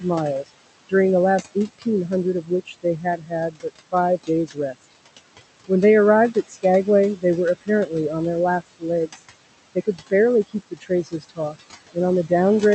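Noise suppressor artifacts run through the whole clip. The room noise sits about 14 dB below the speech. The suppressor pulls it down by about 18 dB between phrases and lets it swell back under them, leaving a residue that pumps with the speech rather than holding steady like plain hiss.

Speech cut by the noise suppressor follows at 0.0–1.86 s, 2.43–4.92 s, 6.34–6.64 s, 7.17–7.91 s, 8.61–9.21 s and 9.75–12.31 s. Soft consonants and word endings are taken for noise and dropped by up to about 21 dB. They sound swallowed and faint, not chopped off abruptly as a dropout would be.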